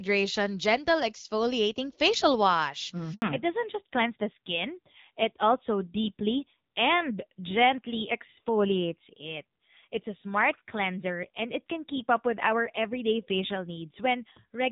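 At 3.14 s the speech cuts out for 80 ms, to 3.22 s. This is a handover gap: the call was passed between networks and no speech frames arrived during the switch, so the voice dies away and goes silent, and whatever was said in that window is lost.

From 3.22 s to the end the call falls back to narrowband. Before the gap the wideband HD Voice sound carries light codec coloration, consistent with AMR-WB at about 12.65 kbit/s. Afterwards nothing above 4 kHz remains, and the speech turns duller and rougher, which fits AMR-NB at about 7.4 kbit/s.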